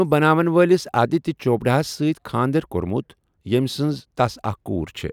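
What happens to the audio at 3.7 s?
Nothing goes wrong at 3.7 s; the speech plays through that moment intact, with no dropout, click or distortion.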